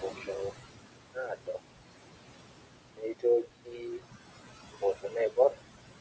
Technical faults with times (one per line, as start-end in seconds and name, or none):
0.00-6.00 noise suppressor artifacts
0.01-0.56 speech cut by the noise suppressor
1.13-1.60 speech cut by the noise suppressor
2.94-4.03 speech cut by the noise suppressor
4.71-5.62 speech cut by the noise suppressor